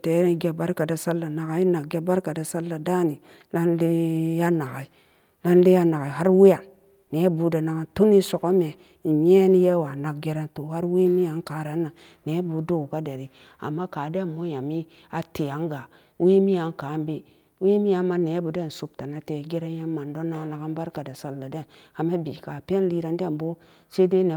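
No technical faults can be heard anywhere in the speech.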